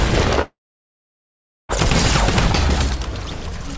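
At 0.42 s the sound gives way to a short continuation, a buzz or hiss that fades within about a tenth of a second, leaving about 1.16 s of silence before the audio resumes at 1.71 s, with roughly 1.28 s simply gone. This is most likely a long network dropout: packets stopped arriving, the receiver briefly extended the last sound to cover the gap, then went quiet. Throughout the clip, nothing is heard above 8 kHz, which fits a G.722 call path at 64 kbps.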